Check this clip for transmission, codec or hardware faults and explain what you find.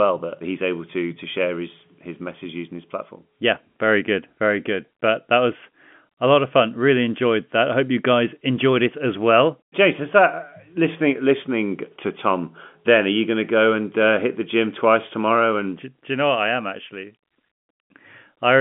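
Nothing here points to a transmission, codec or hardware fault; the speech comes down an ordinary G.711 telephone line, so the sound stays within the usual phone band, with nothing above about 3.7 kHz, exactly as that coding would have it.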